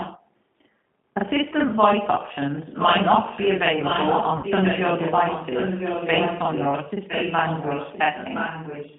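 Right from the start the whole thing runs through a G.729 codec. The band is squeezed to roughly 150 Hz up to 3.4 kHz, and the speech comes out rough and a bit synthetic, since the decoder rebuilds it from a filter, a pitch predictor and a few pulses per frame. The damage is plainly audible. Over the top of that sits a channel delay doubling. One channel trails the other by about 43 ms, which fits a 2048-sample buffer, and once they're summed to mono you hear a same-level slap right behind every syllable.

In the first 0.22 s there's a faint copy of the voice arriving about 1.01 s late, roughly 10 dB under the speech. That's most likely an echo leak, where a far end on loudspeaker didn't fully cancel what its mic picked up and sent it back. The same echo leak returns, louder at about 5 dB down and still about 1.01 s late, from 2.72 to 4.85 s, from 5.07 to 6.79 s, and from 7.08 s to the end.

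From 4.37 to 4.47 s there's VoIP packet loss concealed by the speech codec. About 60 ms of audio went missing, which points to three lost packets. The decoder papered over the gap by extending its last pitch and filter into a buzzy tone or coloured noise that fades, and the voice stays weak for a moment after real audio returns.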